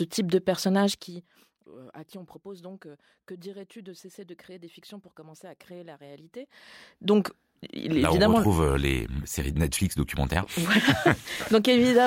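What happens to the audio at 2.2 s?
Nothing goes wrong at 2.2 s: the speech carries on intact, with no dropout, distortion or abrupt jump in level.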